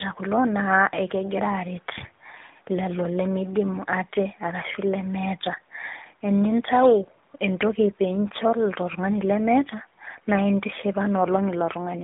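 Tandem speech coding runs through the whole speech clip. It passed through two speech coders in turn, consistent with GSM full rate and then AMR-NB at 12.2 kbit/s with a G.711 link between, and the second recoded the first's damage. The result is rough, warbly and muffled, with nothing above 3.8 kHz. A loudspeaker feedback squeal starts at 4.77 s, just after "lelo lemeidimu aate arashu", and lasts until 7.45 s. A microphone picking up its own loudspeaker sent a 4 kHz tone round a loop with gain above one. It swells over about two seconds to roughly 10 dB above the speech.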